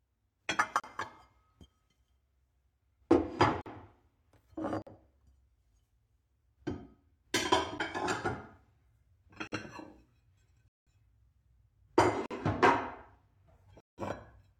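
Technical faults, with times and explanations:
0.80–0.84, 3.61–3.66, 4.82–4.87, 7.78, 9.47–9.52, 10.68–10.87, 12.26–12.31 and 13.80–13.98 s: blocks of digital silence. The sound drops abruptly to silence with no fade. Half the gaps are about 46 ms, which fits a missed 2048-sample buffer. The longer holes near 10.7 and 13.8 s read as real dropouts.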